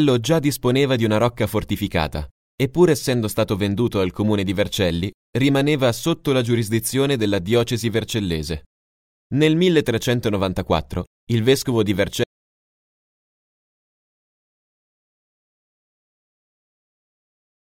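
At 12.24 s the audio drops out to silence through the end, with no room tone, most likely a lost input while recording carried on.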